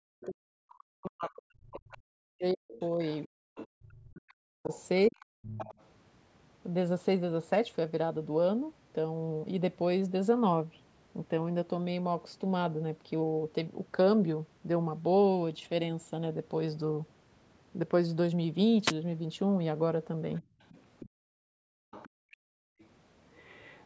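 From 0.16 to 5.3 s the speech is pulled down in pieces, for about three seconds in total, dropping by up to about 40 dB. This is speech suppressed in double talk, likely because an echo canceller could not separate the talker from loudspeaker echo while both sides spoke. Unlike gating, it is the voice itself that dips and loses its top, not just the room sound.

Over the same stretch, the other side's voice leaks through, from 1.26 to 3.68 s at about 20 dB below the talker and again from 4.71 to 5.85 s at about 15 dB below. It is a second voice left in the microphone signal, an extra talker rather than a loss of level.

From 3.31 to 3.47 s the background drops by about 40 dB for roughly 150 ms and then returns. This is background gated by the echo canceller, clamping the microphone while the loudspeaker plays. The room tone vanishes while nothing is added, which sets it apart from leakage.

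From 18.84 to 18.93 s a short swish of static is heard. This is a wireless microphone noise hit, where the FM radio signal fades and receiver noise rises. It is a brief noise burst rather than a level drop.

From 20.36 s to the end the other side's voice leaks through again, at about 25 dB below. Within that stretch, from 20.43 to 22.8 s, the background is gated by about 40 dB, for roughly 1.5 s in total. Both play against a band-limited signal with nothing above 8 kHz, which comes from normal call processing.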